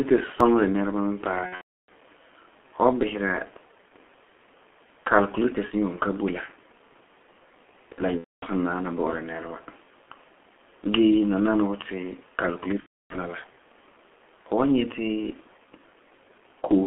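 G.723.1 codec damage runs through the whole 17-second speech clip. The line is band-limited to 250 Hz to 3.4 kHz, so the voice sounds muffled and thin. Heavy coding damage makes it hoarse, with smeared consonants, because the codec rebuilds each 30 ms frame from a coarse, slowly updated voice model. The thin, grainy quality points to a rate of roughly 6 kbit/s.

A repeated buffer occurs at 0.40 s. Fresh audio missed its deadline, so the playback device sent the previous 1.33 ms block out a second time. That fits a 64-sample buffer. A block this short does not register as a stutter. It comes across as a tiny click at the hard seam where the repeated block joins, and about a millisecond and a half of real audio is displaced.

VoIP packet loss concealed by the speech codec first appears from 1.46 to 1.89 s. Lost packets account for 390 ms spread across 420 ms, with one unbroken gap of 330 ms, which fits thirteen missing 30 ms frames. 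The decoder filled the gaps by extending its last pitch and filter settings and lowering the gain frame by frame. The result is a buzzy, drawn-out tone that fades out, and the voice stays weak and distorted for a short while after real packets resume, because each decoded frame depends on the one before it.

The same concealment returns from 8.18 to 8.44 s, covering 240 ms (about eight frames), and from 12.80 to 13.16 s, covering 300 ms (about ten frames). Each time there is the same buzzy, decaying fill and a slow recovery.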